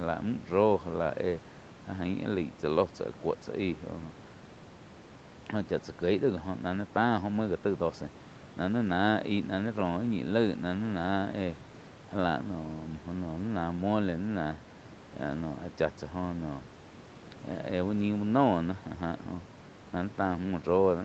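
No technical faults can be heard anywhere in the speech. The top end stops at 8 kHz, as expected from the call's microphone processing and codec, and a low room noise sits about 20 dB below the voice.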